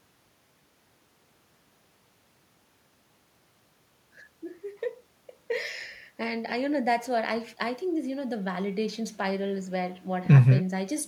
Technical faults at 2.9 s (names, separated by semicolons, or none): none